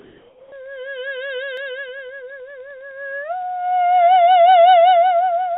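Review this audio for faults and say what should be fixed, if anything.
From 0.00 to 0.52 s, the music's quiet background, about 32 dB below the loud passages, is replaced by comfort noise about 4 dB quieter. This is likely discontinuous transmission muting the sender. On a spectrogram the textured floor becomes a smooth, featureless wash that cuts off at 4 kHz like the rest of the call band. Disable voice-activity detection and DTX when sending music.

At 1.57 s a few dropped samples, a fraction of a millisecond, produce one sharp click, likely from a buffer glitch. The waveform shows an abrupt step where it skips ahead, and the spectrogram shows a thin vertical line across all frequencies. Give the capture and playout buffers enough headroom that they never underrun.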